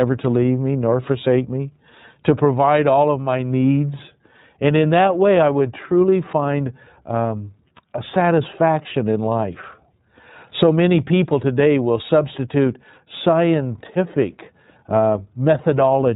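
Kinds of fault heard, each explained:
iLBC codec: The whole clip carries the sound of the iLBC codec, a narrowband VoIP coder that handles each 30 ms frame on its own. The rate of 13.33 kbps fits that 30 ms mode. Nothing above 4 kHz gets through, so the speech sounds boxed-in. The damage is plainly audible as a rough, slightly synthetic grain on the speech. The coder models the excitation afresh in every frame, and that produces this texture. A plain low-pass filter would dull the top end without roughening it.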